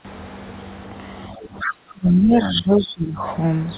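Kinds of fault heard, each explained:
Speech suppressed in double talk: The talker's speech dips by about 10 dB near 1.34 to 1.43 s, then sinks much further from 1.68 to 3.22 s, by roughly 20 dB at its deepest. This is likely an echo canceller turning down the near talker while the far side was also speaking.
Other side's voice leaking through: A second, fainter voice slips in at 1.59 to 1.74 s and again at 2.79 to 2.94 s, roughly 10 to 15 dB below the main talker. It is likely loudspeaker playback of the far end that the echo canceller failed to remove fully.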